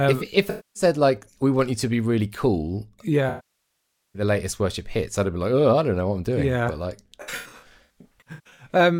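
Speech, hit by AAC frame loss with concealment in three places. From 0.49 to 0.83 s, between "if if" and "like we want you", about 256 ms of sound is replaced by a smeared, noisy patch. From 3.29 to 4.22 s, after "to be really cool" and before "latest worship hits I'd", about 853 ms of loss makes the concealment decay toward silence before the signal fades back in. From 7.21 to 8.66 s, about 747 ms of loss is scattered in bursts of up to roughly 150 ms, giving choppy, phasey gaps. The decoder is rebuilding missing frames from the last good spectrum, so on a spectrogram each gap shows as blurred, featureless energy, which in the longer losses fades and makes the waveform envelope sag.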